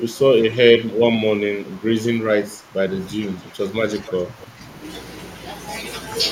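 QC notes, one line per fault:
0.00–4.60 s, speech suppressed in double talk: seven dips at 0.00–0.18, 0.79–0.99, 1.47–1.84, 2.32–2.77, 3.16–3.60, 4.04–4.13 and 4.34–4.60 s, each pulling the speech down by about 10 dB through 3.60 s and about 5 dB in the last two, with a few hundred milliseconds affected in the longer ones. The likely cause is an echo canceller mistaking overlapping far-end talk for echo and ducking the near talker. On the waveform the envelope sags in patches; the spectrogram shows energy thinning, upper bands first.
4.1 s, echo leak: a brief scrap of delayed voice from 4.08 to 4.12 s, about 20 dB below the speech and trailing it by 293 ms, which fits sound from a loudspeaker reaching the far-side microphone and likely escaping an incompletely converged canceller. It is short and faint, heard as a ghostly flick under the main voice. The spectrogram shows a weak copy of the speech's harmonic pattern shifted about 0.3 s later; the waveform shows only a small low-level burst.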